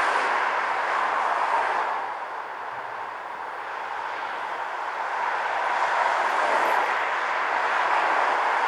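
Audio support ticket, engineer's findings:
Listened through the full recording; nothing stood out, no action needed on the audio side.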